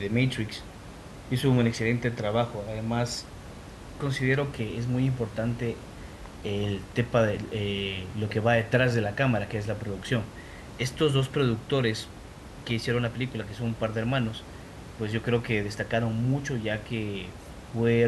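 Nothing stood out on listening to this speech, with only the room's own background noise audible about 16 dB below the talking.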